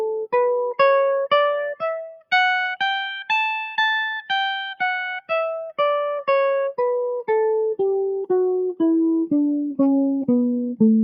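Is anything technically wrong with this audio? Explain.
Yes. Throughout this music, a noise suppressor applied to music or sounds is at work. Built for speech, it treats sustained tones and reverb as noise. Level swings by roughly 5 dB, so held sounds pump and thin while attacks pass through.

From 1.76 to 2.32 s and from 5.63 to 5.79 s, sound is cut by the noise suppressor. It mistakes these passages for noise and pulls them down, by about 21 dB at the deepest. Sustained parts and decays sink abruptly.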